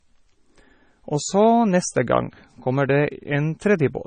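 Heavy MP3 compression, likely from a very low bitrate (the damage fits roughly 24 kbps), runs throughout. The encoder discards everything above 9 kHz, dulling the speech, and weak frequency lines flicker between frames, leaving a watery, swirly texture and smeared onsets.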